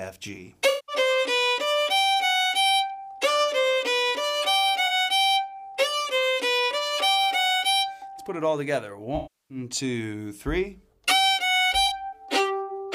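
AAC frame loss with concealment hits at 0.69–0.96 s, 4.87 s, 9.16–9.58 s and 11.86 s: the decoder smears the last good spectrum over gaps, giving noisy, phasey patches rather than clean dropouts.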